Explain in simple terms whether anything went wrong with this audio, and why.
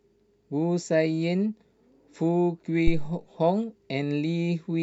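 A phantom power thump hits at 2.87 s and dies away by 3.16 s. Switching microphone power on a live input sends a sudden voltage step through the circuitry, heard as a deep thud that fades within a fraction of a second.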